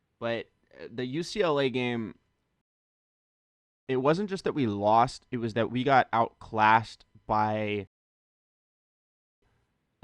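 The speech drops into dead silence twice, from 2.61 to 3.87 s and again from 7.87 to 9.42 s, then picks up exactly where it broke off, resuming on "it wasn't just that" after the first gap. These are rebuffering stalls: playback exhausted its downloaded audio and waited for more to arrive. No speech is lost, but the pauses add about 1.26 s and 1.55 s to the clip.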